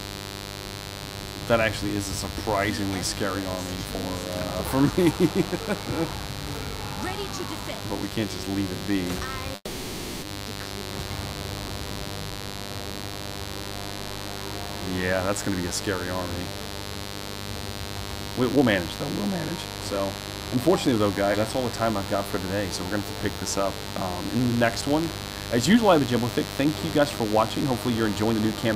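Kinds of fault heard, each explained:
Mains buzz: A raspy 50 Hz buzz runs through the whole clip at about 10 dB below the audio. Switching spikes twice per mains cycle spread harmonics up to several kilohertz, which show on a spectrogram as evenly spaced horizontal lines across the full length.
Call audio freeze: From 9.55 to 10.24 s the sound stops moving forward. The last sound is held and fades for 0.67 s, with about 40 ms of silence. The likely cause is an empty jitter buffer. Playback then resumes where it stopped. The waveform shows a decaying smear, then normal audio again.
Jitter buffer speed-up: The audio hurries without any change in pitch, at 114% from 20.55 to 21.23 s (about 100 ms removed) and at 108% from 25.73 to 28.69 s (about 0.3 s removed). Single pitch periods are cut out repeatedly, so on a spectrogram the harmonics stay level while events arrive closer together.
Skip ahead: At 21.33 to 21.36 s playback jumps forward and roughly 150 ms of audio is lost. 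The two sides are joined with only about 10 ms of fill. The waveform shows an abrupt seam, and on a spectrogram the content changes suddenly with no gap between.
Jitter buffer slow-down: From 21.57 to 25.04 s the audio drags slightly, at 98%, as repeated pitch periods add 91 ms in total. Pitch holds steady while sounds are drawn out. The spectrogram shows harmonics stretched a little in time, with small repeated patterns in the waveform.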